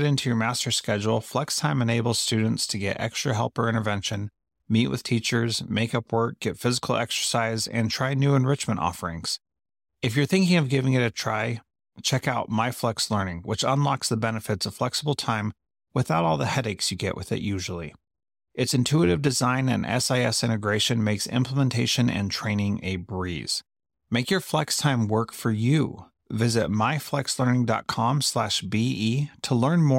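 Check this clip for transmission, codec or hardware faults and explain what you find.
Nothing turned up here; I listened through the whole speech recording and couldn't pick out any transmission, codec or hardware fault.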